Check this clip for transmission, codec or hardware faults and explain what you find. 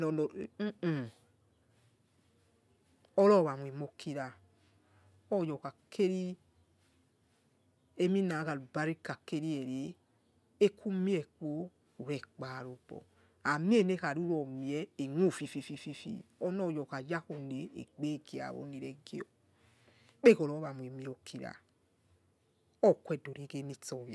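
Nothing in this speech recording points to a problem in how it was sent, encoded or captured. There is nothing to report at any point in the clip.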